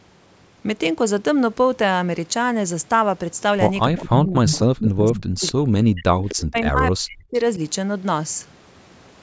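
From 3.87 to 6.1 s the talker's speech is pulled down in pieces, totalling about two seconds, with the deepest dips near 40 dB. This is speech suppressed in double talk: with both parties talking at once, the echo canceller likely could not tell the near talker from loudspeaker echo and attenuated everything. A second stretch follows at 6.49 to 7.35 s, where the voice drops out again for roughly 0.7 s at similar depth.

During and just after the first suppression, short echo leak fragments appear at 3.96, 4.46, 5.15, 5.47 and 6.29 s, each lasting from about 40 to 130 ms. They are a copy of the speech delayed by 259 ms, likely residual loudspeaker pickup that the far end's canceller failed to remove and sent back. Levels vary: the 4.46 s burst is the most obvious at about 5 dB below the speech, 3.96, 5.15 and 6.29 s sit near 15 dB down, and 5.47 s is faint at about 25 dB down. The band-limited call processing caps everything at 8 kHz.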